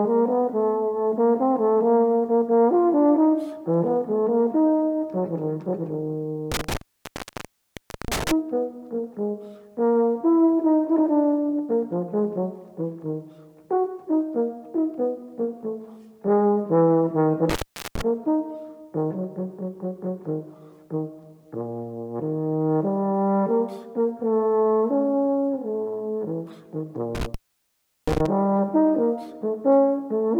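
Intermittent contact hits three times: 6.52 to 8.32 s (open about 1.33 s), 17.50 to 18.02 s (0.40 s), and 27.15 to 28.26 s (0.73 s). A loose plug or cable briefly breaks, so the audio drops out with crackle at each edge and faint hiss through the gap.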